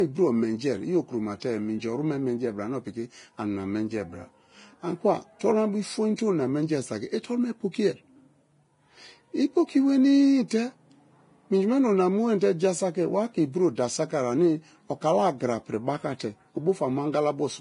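Throughout the speech, heavy codec damage leaves the treble hissy and grainy, with roughened tones and blurred consonants. This is Vorbis compression, likely at a bitrate near 29 kbps. A spectrogram shows nothing above 10.5 kHz, and the remaining high band is blotchy and noisy.

Pre-echo occurs four times, where block-wide quantisation noise spills ahead of sharp onsets: a 21 ms hiss at 1.40 to 1.42 s before "minji oru me menjie", a 12 ms one at 5.40 s, 20 ms at 6.16 to 6.18 s before "te ona menji", and 11 ms at 16.19 s after "o̱ kala agra piri". Each appears as a smear before the attack on the waveform.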